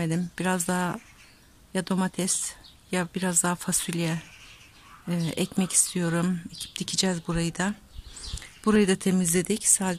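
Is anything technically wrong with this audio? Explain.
Yes. At about 8.76 s there is a single sharp click, a brief discontinuity that shows as a thin vertical line spanning the spectrum. The likely cause is dropped samples: a fraction of a millisecond of the stream goes missing, so the waveform jumps abruptly from one value to a later one. That step is far too short to remove any audible sound, but the instantaneous jump spreads energy across all frequencies and is heard as the click.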